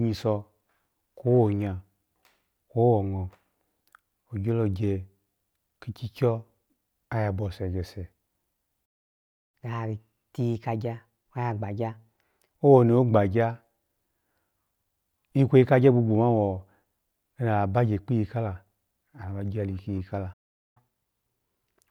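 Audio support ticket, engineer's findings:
Playback stall, 8.85–9.55 s (0.68 s) and 20.33–20.77 s (0.43 s). Likely buffer underrun or blocked player thread starving the output. Speech cuts out mid-flow into silence, then resumes where it left off.

Catch-up at higher speed, 9.55–12.55 s at 1.15x and 20.77 s to end at 1.25x. Player resampling its backlog to regain lost time. Speech runs fast and raised, about 2 semitones from "owoni ogbanya" before settling, then about 4 semitones until the clip ends.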